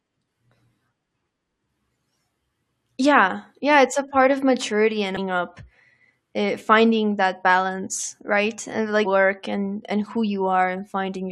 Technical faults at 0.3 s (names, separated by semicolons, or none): none